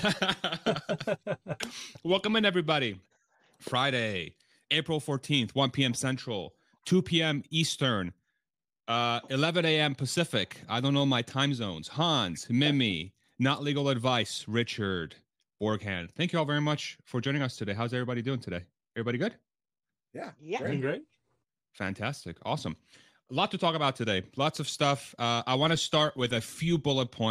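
Nothing stood out as a technical fault on listening to the speech.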